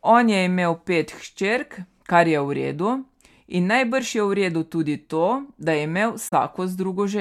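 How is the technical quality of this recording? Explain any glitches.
One glitch stands out, a corrupt frame concealed near the end, from 6.28 to 6.33 s. The decoder detected damaged AAC data and masked it over about 56 ms, which fits two lost frames.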